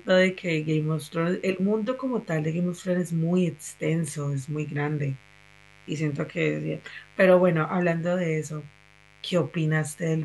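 A steady, raspy buzz sits under the speech from start to finish, roughly 30 dB below it. This is mains buzz: sharp switching spikes at twice the 50 Hz mains rate leak in, their harmonics stretching up to several kHz.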